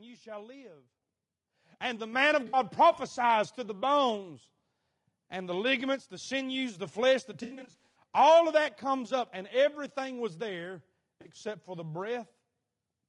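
Low-delay AAC compression is audible throughout the speech. The voice sounds rough and grainy, with noise filling the gaps between harmonics and a thin, synthetic top band. This is likely the short-frame AAC-ELD codec, which resolves pitch poorly, and the damage suggests a bitrate around 32 kbps.

Microphone volume stepped up at 1.02 s, just after "you shall live", and again at 2.13 s. The software raised the input gain in single jumps of about 8 dB and then about 4 dB, so the voice and the background get louder together in an instant.

AAC frame loss with concealment starts at 2.47 s and runs to 2.57 s, just before "prophesies to the bones". About 60 ms of audio is gone, which points to three lost frames. The decoder rebuilds the gap from the last good spectrum, leaving a short smeared, noisy patch. A second loss comes after "sinews the flesh the", from 7.43 s to 7.92 s. There, about 320 ms is lost in bursts spread over roughly half a second, and the longest gap is around a tenth of a second, so the sound goes phasey and breaks up repeatedly. 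A final 40 ms loss at 11.21 to 11.28 s leaves a brief smear.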